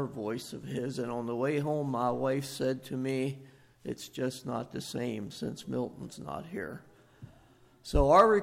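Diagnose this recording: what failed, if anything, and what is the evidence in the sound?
Nothing failed; no stage shows any audible fault.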